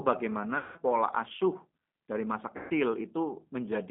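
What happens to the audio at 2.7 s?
Packets were lost on the VoIP link just after "dari masa", from about 2.57 s to 2.73 s. VoIP packet loss concealed by the speech codec covers the gap, roughly 130 ms of missing signal, which fits thirteen 10 ms frames. With no new data, the decoder keeps re-running its last pitch period and vocal-tract filter while turning the gain down frame by frame. The speech smears into a buzzy tone or coloured noise that sags and fades. Because each frame is predicted from the one before, the speech stays thin and warped briefly after real packets resume near 2.7 s.

Underneath, the whole call runs through the G.729 codec at 8 kbit/s, apparently the G.729A variant. It rebuilds each 10 ms frame from a filter, a pitch predictor and a handful of pulses. Only a narrow 200 Hz to 3.5 kHz line band survives, so the speech sounds boxy and dull, with a plainly audible rough, synthetic grain.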